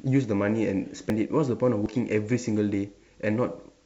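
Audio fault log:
1.1 s, 1.86 s and 2.74 s: dropped buffer (overrun). The speech jumps forward abruptly at each point. No gap or silence is heard. A chunk of audio has simply vanished. At 1.1 s and 1.86 s it is roughly 70 ms, and at 2.74 s nearer 20 ms. The likely cause is the recording software failing to collect its samples before the hardware overwrote them.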